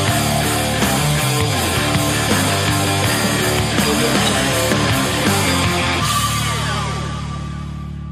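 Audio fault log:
No technical faults can be heard anywhere in the audio.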